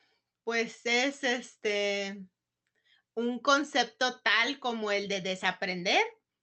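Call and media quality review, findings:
No faults found; the speech shows the call path's band limit at 8 kHz, consistent with an Opus wideband setting at roughly 40 kbps, and nothing further to flag.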